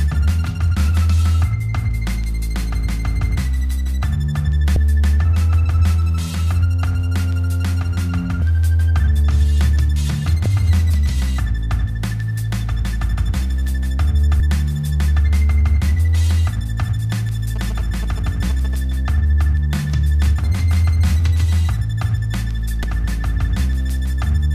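Brief smeared blips at 4.76, 8.41, 10.45 and 14.40 s mark places where the audio lurches forward by roughly 150 to 200 ms. These are compressed frames skipped: a handful of 26.1 ms frames went missing or were rejected by the decoder, and the overlap between neighbouring frames softens each join.

From 17.56 to 18.75 s a galloping dit-dit-dit of short 217 Hz buzzes sits about 20 dB below the signal. These are GSM signalling bursts from a nearby 2G phone, whose radio pulses the audio circuit rectifies into audible sound.

One last, shorter frame skip of about 70 ms follows at 22.83 s.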